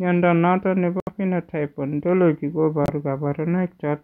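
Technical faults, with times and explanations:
1.00–1.09 s and 2.84–2.90 s, corrupt frame muted: the speech drops to complete silence for 90 ms and then 60 ms, cut off abruptly. This is consistent with the decoder rejecting damaged compressed frames and the player muting them. The waveform shows flat near-silent runs, and the spectrogram shows clean vertical full-band gaps. Timing around both gaps stays intact.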